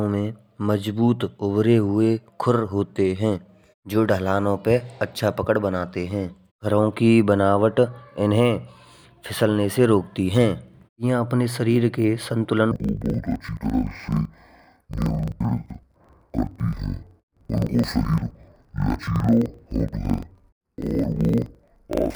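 Speech that, from 12.72 s to the end, drops an octave and turns doubled and choppy, stuttering about 23.4 times a second. This is interleaved audio read as planar: each 42.7 ms block, which fits a 2048-sample block, is split into halves played together at half speed.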